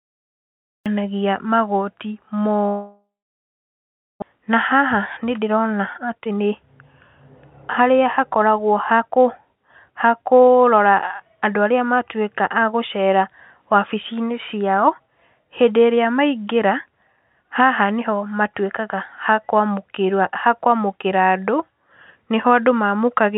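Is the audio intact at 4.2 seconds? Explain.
No, 4.2 s falls inside a long network dropout (2.68–4.24 s), likely: concealment buzz fades to about 1.1 s of silence and about 1 s of sound never returns, unlike a brief packet-loss glitch.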